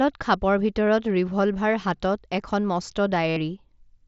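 Near the end of the speech, from 3.29 to 3.37 s, the sound turns into a steady buzzy tone held at full level for about 75 ms, followed by a slight warble as the real audio picks up again. This is concealed Bluetooth headset packet loss: a run of voice packets, consistent with about ten in a row, never reached the phone over the wireless link. The receiver filled the gap by repeating the best-matching recent stretch of waveform, which keeps the level up but creates that held, buzzy quality instead of a silence. The recording comes through the mSBC wideband headset codec, which leaves only light graininess.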